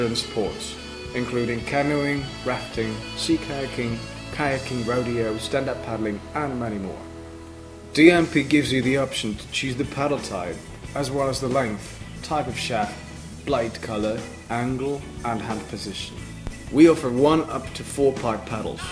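No technical faults can be heard anywhere in the audio, so there is nothing to describe in time order.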